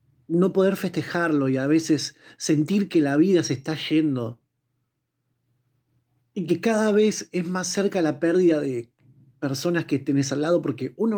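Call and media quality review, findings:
Nothing to flag on this speech clip, as no faults turned up anywhere in it.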